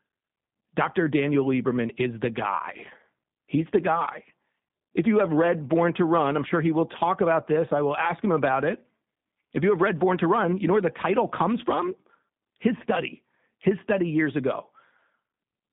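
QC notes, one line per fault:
Throughout: G.729 codec. The speech is squeezed into a narrow telephone band of about 150 Hz to 3.7 kHz and rebuilt from a vocal tract filter, a pitch predictor and a few pulses per frame, which fits G.729A at 8 kbit/s. That model gives the plainly audible rough, synthetic edge. A spectrogram shows a hard ceiling at 3.7 kHz with nothing above, a thin floor below 150 Hz, and smeared, grainy harmonics.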